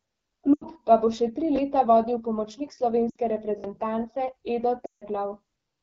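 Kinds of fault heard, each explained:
AMR wideband (HD Voice) codec: The speech sounds rough and raspy throughout, with a buzzy, grainy edge on voiced sounds. The codec models the voice up to 6.4 kHz with a pulse-excited vocal tract filter and fills the band from 6.4 to 7 kHz with shaped noise. The roughness here is plainly audible, which fits one of the lowest AMR-WB rates, around 8.85 kbit/s, where too few bits reach the excitation.
lost AMR speech frames: Three brief gaps where the sound smears, thins and sags. One lasts about 80 ms, just before "pa bo še tri". Another lasts about 60 ms, right after "vodil pomočnik". The longest lasts about 160 ms near the end and fades toward silence. Corrupted frames failed their checks, so the decoder repeated the last good pitch and vocal tract settings at falling gain. Sound resumes weakly afterward. The gap lengths fit runs of three to eight 20 ms frames.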